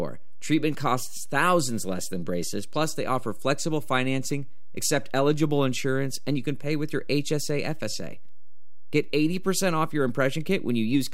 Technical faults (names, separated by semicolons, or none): DC offset